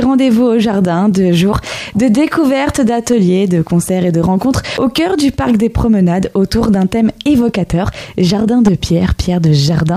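At 4.77 s there is a CD skip: the pickup laser has jumped to another turn of the disc's spiral, so the player briefly mutes and resumes from a different point in the audio. It is heard as a short tick followed by an abrupt discontinuity in the sound. On a waveform this appears as a gap of only a few milliseconds, and the signal on either side of it does not line up. On a spectrogram it shows as a thin vertical broadband stripe.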